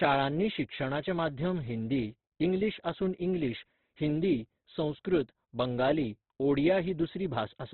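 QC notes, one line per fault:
Throughout: Opus compression. The speech is rough and grainy with nothing above 4.4 kHz, likely a heavy CELT-mode encode at a rate near 12 kbps.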